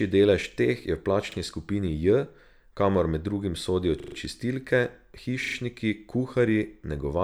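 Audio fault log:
1.32–1.36 s, repeated buffer: one 40 ms slice of speech sounds twice, a brief stutter with a hard join. The waveform shows two identical blocks meeting at a sharp step.
4.0–4.16 s, repeated buffer: the same 40 ms slice plays five times in a row. The result is a stutter, and the spectrogram shows matching stripes with vertical edges at each join.
5.44–5.56 s, repeated buffer: one slice plays four times. The repeats suggest a 40 ms buffer, and no audio seems to be lost.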